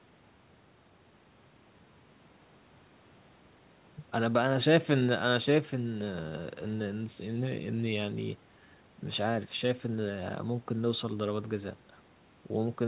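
No technical faults can be heard in this speech.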